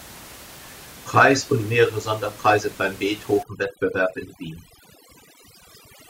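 From 3.43 s to the end, overdone noise removal sets in. Set too strong, it cuts any frequency band lying near its noise estimate. The room noise, about 21 dB below the speech, becomes near silence with twinkling specks. Quiet voice detail goes too.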